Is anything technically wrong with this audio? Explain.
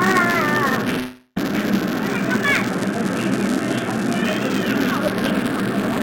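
Yes. Buffer tearing runs throughout: writer and reader of the playback ring buffer cross each period, splicing in audio from roughly 10 ms earlier, giving a steady 200 Hz rattle whenever sound is present. From 0.99 to 1.38 s there is a gap most likely caused by a long network dropout. The last sound is stretched into a fading buzz, followed by a short silence, and the audio then resumes with about 0.3 s missing. The playback timing sits about 70 ms later afterwards. The narrowband call audio stops at 4 kHz.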